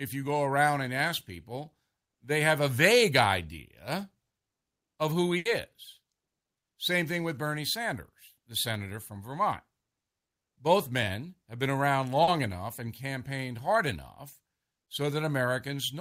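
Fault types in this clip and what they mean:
burst of packet loss: From 5.37 to 5.47 s, 80 ms of speech never arrived, so the receiver extended the last sound into a fading buzz or hiss, then skipped ahead. On a spectrogram, frozen harmonics dim out; the waveform tapers, then restarts abruptly.
short concealed packet loss: Around 12.23 to 12.29 s, 40 ms went missing and was patched by continuing the preceding sound, then blending back into real audio, giving a brief smear or wobble. A spectrogram shows a short blurred, smoothed patch.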